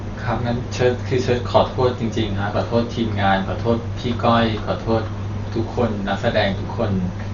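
Throughout, the speech sounds dull and rough, with nothing above 7 kHz and a fluttering noise around tones, likely from heavy Dolby Digital compression at a low bitrate, around 40 kbps. At 4.14 s a single sharp click occurs where the waveform jumps ahead, likely from dropped samples losing a fraction of a millisecond.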